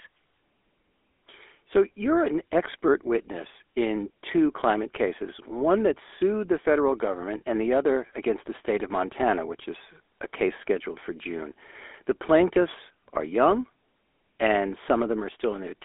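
Speech that has passed through the GSM full-rate codec for its whole length. It is band-limited to a telephone line of roughly 300 Hz to 3.5 kHz, with nothing above 3.7 kHz. The codec damage is plainly audible as a buzzy, gravelly roughness. It comes from modelling the vocal tract and exciting it with regularly spaced pulses built from only a third of the excitation samples, which fits a 13 kbps rate.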